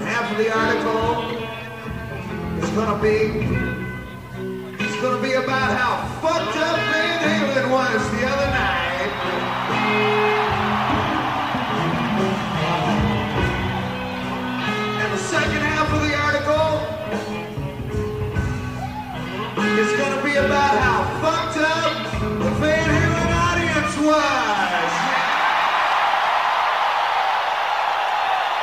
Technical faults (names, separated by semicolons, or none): lost LE Audio frames